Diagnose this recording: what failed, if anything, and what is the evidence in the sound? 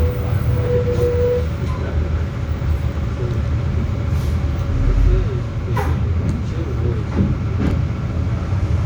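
Chunks out of order at the buffer stage: brief jumbled moments at 2.92–2.97 s and 7.67–7.71 s, where a roughly 10.7 ms block plays three blocks late.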